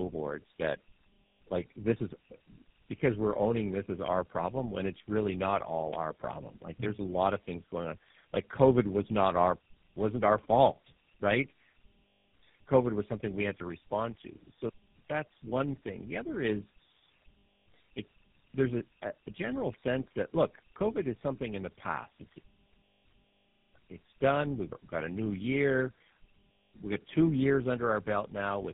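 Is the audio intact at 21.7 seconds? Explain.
No. Tandem speech coding affects 21.7 s as it does the whole clip: the speech was decoded and re-encoded through about three low-rate coders, one resembling G.729A and two GSM full rate, each compounding the last's damage. It sounds rough, muffled and warbly, with nothing above 3.7 kHz.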